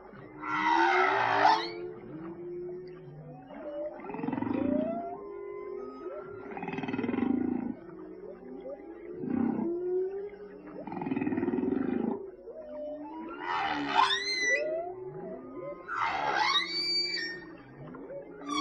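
No technical faults are audible.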